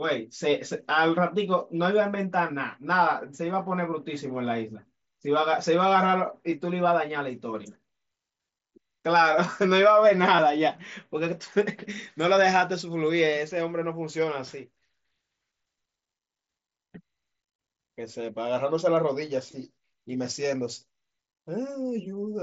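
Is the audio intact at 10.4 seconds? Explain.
No. From 10.36 to 10.39 s there is concealed Bluetooth headset packet loss: about 22.5 ms of speech was lost between headset and phone, a gap that fits three consecutive lost mSBC frames. The receiver filled it by repeating the best-matching piece of the preceding waveform, so this short run comes out as a brief buzzy tone held at full level, followed by a slight warble as the real signal resumes.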